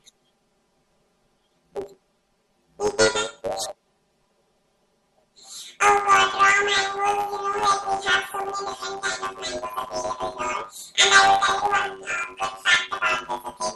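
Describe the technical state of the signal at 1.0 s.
At 1.0 s the speech has planar audio read as interleaved, running the whole clip: 10 ms channel blocks get split into alternating samples, giving a robotic 100 Hz buzz.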